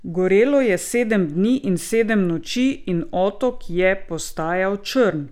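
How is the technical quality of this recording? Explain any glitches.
The technical quality of this recording is sound, with no glitches to explain.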